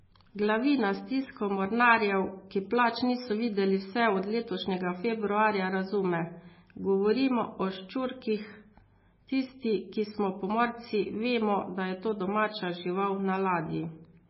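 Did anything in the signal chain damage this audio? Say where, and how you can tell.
Yes. Throughout the speech the sound is watery and swirly, with chirpy, metallic s sounds and nothing above 5.6 kHz. That points to a likely codec stage, heavy MP3 compression at a very low bitrate near 17 kbps, where the encoder cut the treble and let weak frequency lines flicker between frames.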